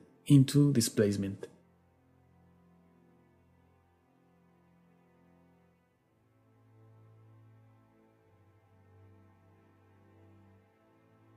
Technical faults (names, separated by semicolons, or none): none